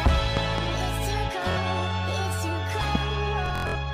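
A loud pop, two sharp thumps, lands between 0.37 and 0.61 s, well above the sound, which carries on underneath. An electrical voltage glitch is the likely cause. At 1.51 to 1.58 s, a Bluetooth stutter replays a short slice while data is missing, covering about 46 ms. A single pop hits again at 2.95 to 2.97 s. From 3.46 to 3.76 s, heavier Bluetooth stutter buzzes in scattered repeats, 186 ms lost in all. Its longest gap is 93 ms.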